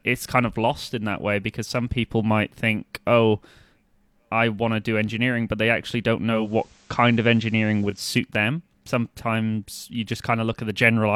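After "but they actually don't", at 6.26 s, the digital radio blends to analogue FM over a 314 ms cross-fade. The level shifts by about 2 dB, and a faint hiss sits well below the speech. This lasts until 8.14 s, just before "them sometimes you".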